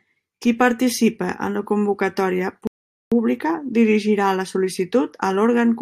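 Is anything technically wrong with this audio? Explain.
Yes. At 2.67 s, after "participe en la convocatòria", a rebuffering stall occurs. The player's buffer ran dry, silence held for about 0.44 s, then speech resumed at "pública dirigirà la" with nothing missing.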